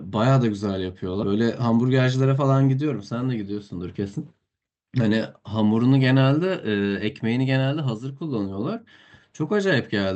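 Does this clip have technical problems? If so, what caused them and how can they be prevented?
Yes. At 1.23 s there is a skip ahead. About 0.4 s of speech is simply gone, and the two sides join with no gap. Audio was dropped, either on the way or by the jitter buffer when it overflowed, while later audio was already waiting. A larger jitter buffer ceiling, or better network queuing, prevents this.

From 1.33 to 2.44 s comes a jitter buffer speed-up. The speech runs at 111 percent of normal speed, yet the pitch stays the same, so it sounds hurried. The receiver cut short pitch-period pieces, roughly 150 ms in all, to drain excess delay. A steadier network path with less bunched packet arrival avoids this.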